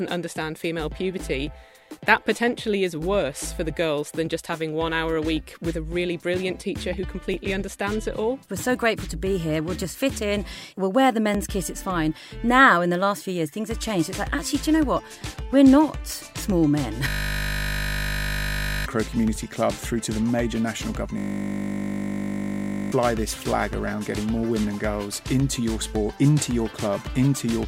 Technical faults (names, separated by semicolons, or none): overlapping chunks; system hang loop